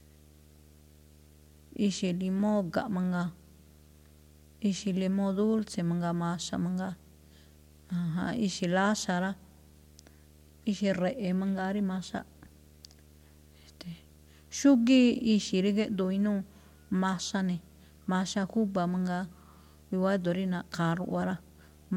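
Speech recording with a video or display buzz running throughout: a 75 Hz field-rate buzz with hash above it, sitting roughly 30 dB below the speech, from a screen or video cable coupling into the audio. A spectrogram shows steady horizontal lines at 75 Hz and its harmonics continuing through pauses.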